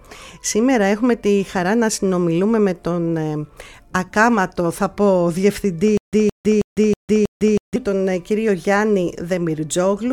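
From 5.97 to 7.76 s a stutter with silent gaps sets in: a 166 ms burst repeats five times every 320 ms, separated by 154 ms of digital silence, likely from a stalled stream replaying its last fragment. The waveform shows identical blocks alternating with flat silent gaps.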